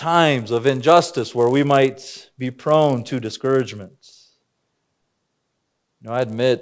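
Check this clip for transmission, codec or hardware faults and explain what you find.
One fault runs through the whole speech clip: a resampler restarted on every block. Each 10 ms block was converted from 48 kHz to 16 kHz on its own, leaving an error at every block edge. This is heard as a 100 Hz buzz that sounds only while signal is present. A spectrogram shows lines spaced 100 Hz apart, and the waveform shows small discontinuities every 10 ms.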